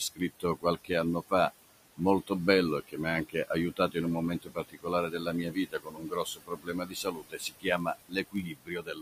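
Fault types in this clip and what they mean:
noise suppressor artifacts: Throughout the clip, a noise suppressor pulls down the frequency bands it judges to be steady noise, frame by frame, with about 18 dB of noise reduction. The room noise, sitting about 13 dB below the speech, sinks in the pauses and comes back up under the speech. The background level therefore tracks the talker instead of staying constant.
speech cut by the noise suppressor: In three places the suppressor mistakes speech for noise and turns it down with the background, so those parts sound swallowed. From 0.14 to 0.91 s, just before "anno fa", the drop reaches about 20 dB, affecting around a fifth of a second. From 3.29 to 3.96 s, between "mi ha" and "in un", it reaches about 16 dB. From 4.42 s to the end, after "in un", it reaches about 22 dB.
block size mismatch (padded): From 7.35 to 8.72 s, one stage hands over shorter blocks than the next stage reads, and the remainder of each block is filled with zeros. 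The result is a short gap in every block, heard as a 46.9 Hz buzz at the block rate, which fits a 1024-sample read block. The inserted gaps also stretch the audio, so it runs at 0.999 times normal speed during that stretch.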